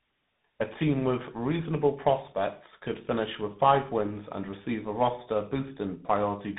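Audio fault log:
Throughout: tandem speech coding. The speech was encoded and decoded twice by two different speech coders in a row, and the second worked on the first's already damaged output, so the errors stack. The result is a rough, muffled, warbly texture with nothing above 3.8 kHz. The rough, noisy edge fits a GSM full-rate stage followed by CVSD delta modulation, with a plain G.711 A-law link likely between them.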